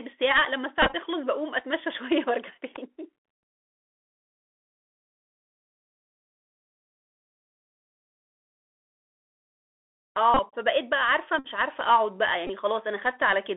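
Throughout, the speech sounds thin and boxed-in, with s sounds turned scratchy and a fine granular hiss beneath everything, the plainly audible mark of the Bluetooth CVSD headset codec. The band runs only from about 300 Hz to 3.5 kHz, and because this 64 kbps scheme sends a single up-or-down bit per sample with a self-adjusting step, loud bright sounds outpace the step and break up.

At 0.82 s a rough, stuttering buzz lasts until 0.95 s, with the longest steady stretch around 10 ms. Shorter bursts of the same buzz follow at 10.34 to 10.41 s, 11.39 to 11.46 s, and 12.47 to 12.51 s. Each is a Bluetooth headset packet repeated fault. Voice packets between headset and phone were dropped, and the chip replayed the previous packet. Repeating every 3.75 ms, that replay produces a buzz near 267 Hz, about 79 ms of lost audio in the first burst and 38, 56 and 19 ms in the later ones.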